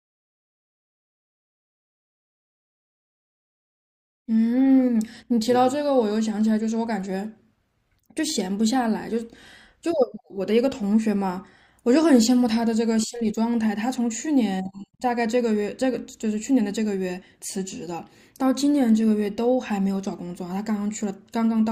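Speech recording with no audible technical faults.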